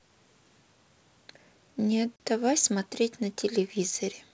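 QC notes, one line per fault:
2.16–2.20 s, packet loss on an ADPCM call: 40 ms hard-edged silence, about two packets; the decoder's predictor and step size desynchronise, so the speech returns slightly distorted before settling.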